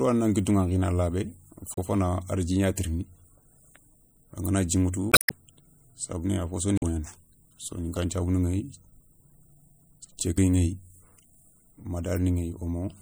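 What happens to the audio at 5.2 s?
From 5.10 to 5.32 s the stream carries damaged data. Corrupted bytes make the decoder misread or reject frames, lose sync and hunt for the next frame header, producing a short glitch.

Underneath, and across the whole clip, the sound is watery and swirly with dulled treble and smeared attacks, likely from MP3 compression at a low bitrate (the artefacts fit about 64 kbps). Unlike the glitch, this degradation is steady rather than a single event.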